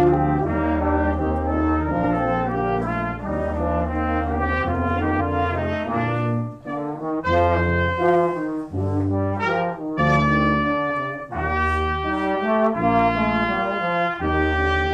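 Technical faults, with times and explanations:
2.00–2.05 s, 5.16–5.22 s, 7.16–7.22 s and 9.94–10.00 s: compressed frames skipped. At each point, whole frames of compressed audio are never played, so the sound jumps ahead. The jumps at 2.00 s and 7.16 s drop roughly 100 ms. Those at 5.16 s and 9.94 s drop roughly 200 ms. That fits a few frames of 46.4 ms each, missing from the file or refused by the decoder as damaged. Each join spans about 50 to 60 ms.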